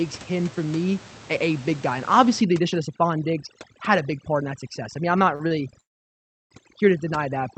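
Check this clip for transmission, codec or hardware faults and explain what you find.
There are three kinds of fault here, all from 2.4 s onward, sitting on a call path whose top end stops around 8 kHz.

Overdone noise removal runs from 2.42 s to the end. The suppressor is set too hard against room noise that's only about 19 dB under the speech, so it's knocking individual bands right out. Quiet speech detail gets taken too. You hear a near-dead background with twinkly specks.

Short stalls from a late packet hit at 5.35 to 5.42 s and 5.48 to 5.53 s. Each time a packet turned up late, the jitter buffer emptied and the receiver stretched the last sound, 41 ms and then 30 ms, before carrying on. Nothing's lost, just a held sound with a slight buzz or dip.

A call audio freeze follows from 5.81 to 6.53 s. The likely cause is packets held up in transit and the buffer running dry. The last sound carries on briefly and then drops to silence for roughly 0.69 s. 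The 700 ms gap is inserted, and the audio resumes where it stopped.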